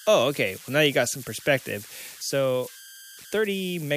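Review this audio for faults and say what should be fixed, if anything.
Converter idle tones run throughout the speech clip, with a tonal component around 1.5 kHz and error energy about 19 dB below the signal. A delta-sigma converter running without dither locks into repeating bit patterns when its input sits near zero, and those patterns produce tones whose pitch follows the input's DC offset. Here that shows up as tonal or rough noise in the pauses and grainy noise under the speech, and the affected stage should be fixed. Enabling dither in the converter, or adding a small dither signal ahead of it, breaks up the idle patterns and prevents the tones.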